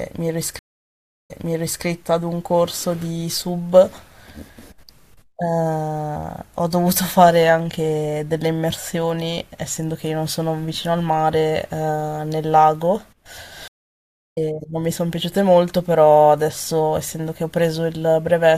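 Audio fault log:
0.59–1.85 s, stream reconnect: the connection drops for 0.70 s of silence, then a fresh decoder resumes 0.55 s earlier, repeating material from a resent burst.
13.68–14.38 s, stream reconnect: another break leaves 0.69 s of silence, and the restarted decoder picks up about half a second later, so that stretch of speech is skipped.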